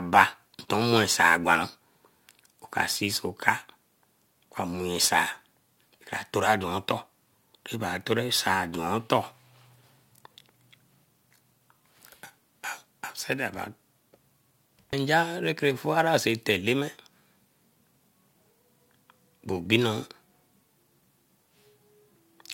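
The speech carries sample clock jitter across its whole length: an unsteady converter clock, wandering by roughly 5 microseconds, mistimes each sample, adding a hiss-like roughness around 25 dB below the signal that grows on loud, bright passages and disappears in pauses.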